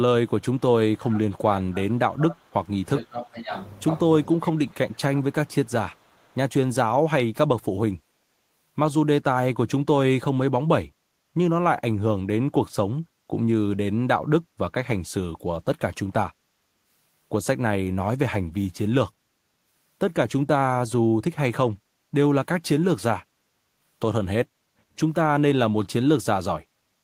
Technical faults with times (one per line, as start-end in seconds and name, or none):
0.97-3.51 speech suppressed in double talk
4.33-5.24 speech suppressed in double talk
5.91-6.36 echo leak
24.66-24.86 background gated by the echo canceller